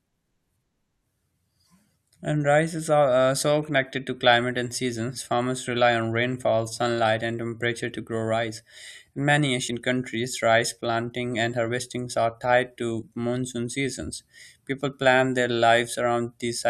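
Compressed frames skipped at 9.67 s: a short run of encoded frames never reached the output, so the speech jumps ahead by about 20 ms.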